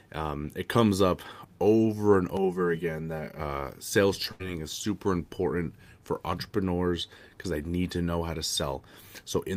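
From 2.37 to 3.40 s, just after "comes up over and", the speech turns hollow and phasey, with fixed notches starting around 100 Hz. This is channel delay (comb filtering): one channel runs roughly 5 ms late, and summing to mono cancels evenly spaced frequencies.

At 4.31 to 4.42 s, right before "is super important for", the last sound is stretched and fades for about 81 ms, then the speech jumps ahead. A burst of packet loss dropped roughly 80 ms of audio, and the receiver filled the gap by extending what it had.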